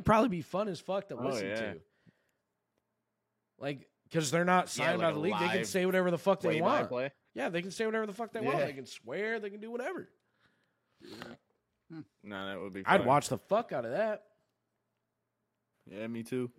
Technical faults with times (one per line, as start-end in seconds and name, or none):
none